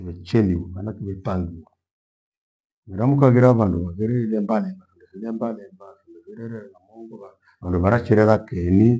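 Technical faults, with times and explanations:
No technical faults found in this speech recording.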